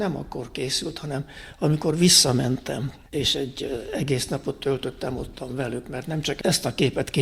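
Nothing stood out as a technical problem on listening to this audio.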